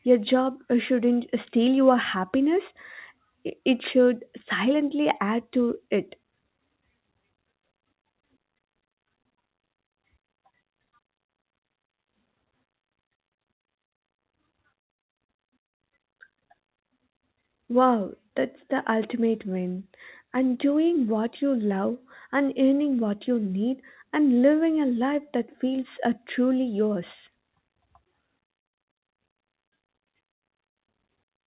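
The speech comes through mu-law telephone coding with its usual narrow band topping out near 4 kHz and the faint level-following hiss that format carries, and nothing in the signal goes wrong at any point.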